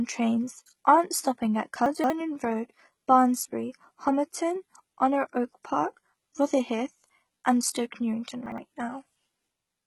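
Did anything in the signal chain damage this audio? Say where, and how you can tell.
Yes. Throughout the speech, the treble sounds bright but synthetic, with gritty, lispy s sounds. This is likely heavy HE-AAC compression at a low bitrate near 16 kbps. The band replication makes it different from a codec that simply cuts the highs.

At the storage or network stage, chunks arrive out of order at 1.86–2.1 s and 8.46–8.58 s. These are jumbled moments, consistent with 60 ms chunks playing late. They are not dropouts, because nothing is missing.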